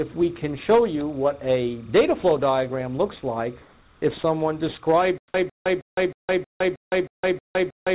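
Timecode bleed runs through the whole clip. Linear timecode from a neighbouring track or cable has leaked into the audio. It sits as a faint chirping warble at around 35 dB below the sound, flipping between tones near 1 kHz and 2 kHz as the square-wave code toggles at its 30 frames per second. Because the call path's band ends at 4 kHz, both tones stay fully audible and are not filtered off.

From 0.12 to 0.14 s, the sound dropped by the voice detector shows up as a 20 ms hole. The sound gives way briefly to a smooth, featureless noise and then returns. The likely cause is the sender's voice detector judging this fragment to be background and pausing transmission, with the receiver filling the 20 ms with comfort noise. That sound is lost.

From 3.62 to 4.02 s, there is comfort noise in place of the background. The background, sitting about 34 dB below the loud parts, loses its texture for 400 ms and becomes a steady synthetic hiss at the same level, so the change is one of character rather than loudness. 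This is likely discontinuous transmission: the sender stopped sending during a pause, and the receiver synthesised noise shaped to the background's rough spectrum.

From 5.18 s to the end, there is a stutter with silent gaps. A 153 ms fragment repeats, each time followed by about 162 ms of digital silence, giving a regular cycle of roughly 315 ms. The likely cause is a stalled player or stream that replays its last buffered fragment on each retry and then runs dry. Everything that should have played after 5.18 s is missing.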